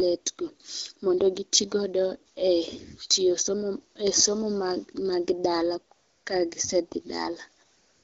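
Speech carried over a wideband phone link whose light coding fits AMR-WB at around 12.65 kbit/s, with AMR comfort noise breaking in three times: a brief blip at 2.33 s, a 0.3 s gap from 5.95 to 6.25 s, and the final 0.38 s from 7.65 s. Each time, the sender judged the talker silent and stopped sending speech frames, so the receiver substituted smooth, steady synthetic noise for the real background. Unlike a noise gate, the pauses fill with even hiss rather than dropping to silence.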